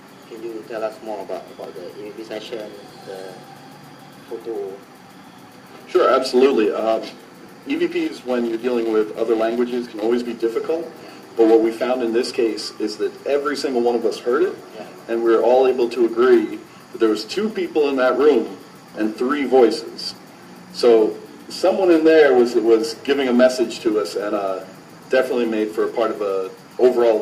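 Clock drift between sender and receiver runs through the whole clip: the sender's clock is about five percent fast, so the receiver's buffer keeps overfilling. Unlike a one-off network dropout, the small hiccups recur unevenly throughout.

Repeated timing corrections follow from 0.01 to 27.03 s, as the receiver keeps discarding short slices to catch up, at an effective 105% rate. The result is faint stutters and a slightly rushed, unsteady tempo with no pitch shift, which separates it from a simple speed-up by resampling.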